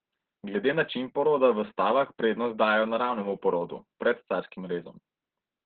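It's a short speech clip, and the whole thing carries heavy Opus voice compression. The band is cut off at about 4 kHz, so it sounds like a narrowband phone call, muffled and dull. The SILK coder is rebuilding the voice from a coarse excitation, which makes it hoarse and a bit robotic from start to finish. That amount of damage fits a very low bitrate, somewhere around 8 kbps.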